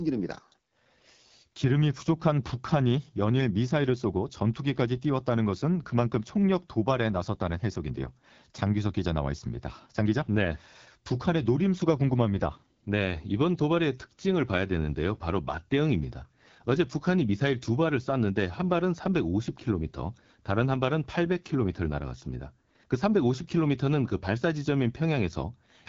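AMR wideband (HD Voice) codec damage runs throughout the speech. The sound is rough and raspy, which points to one of the codec's lowest rates, around 8.85 kbit/s. The pulse-driven vocal tract model lacks bits to shape the voice, and nothing is present above 7.5 kHz.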